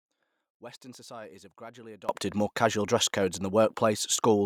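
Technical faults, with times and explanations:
0.00–2.09 s, one channel inverted: speech drops about 22 dB to a faint residue, likely cancelling in a mono sum, until "more casual dress codes".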